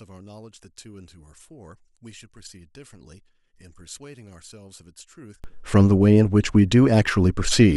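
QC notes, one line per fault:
0.00–5.44 s, one channel inverted: the speech falls by about 28 dB to a faint residue in mono. The likely cause is reversed polarity on one stereo channel, so the material common to both sides cancels and only their small difference remains.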